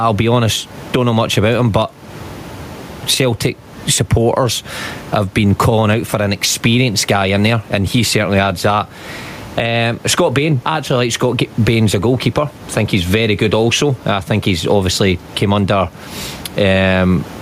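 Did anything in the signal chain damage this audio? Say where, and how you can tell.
Yes. Gain pumping runs throughout the speech: the room noise sits about 30 dB below the speech, and the gain swings by around 15 dB. The likely cause is excessive input gain driving a fast limiter in call processing.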